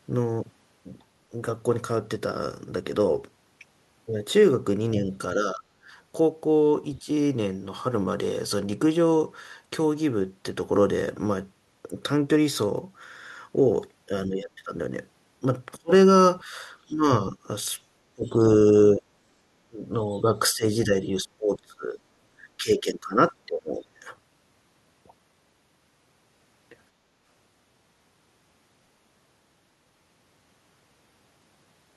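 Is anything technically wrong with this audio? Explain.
Yes. From 5.05 to 5.62 s, 7.03 to 7.08 s, 14.26 to 14.71 s and 15.77 to 23.99 s the speech shows speech suppressed in double talk. The level dips by around 5 to 10 dB, then up to about 25 dB in the long stretch. This likely happened because an echo canceller mistook overlapping talk for its own echo. Unlike a network dropout, the speech dips and recovers.

At 18.25 to 18.3 s and 20.11 to 20.21 s, brief scraps of the other side's voice leak through, very faint at about 35 dB below the speech. These are likely residual loudspeaker echo that the canceller missed. They are a separate second voice, not a repeat of the talker's own speech.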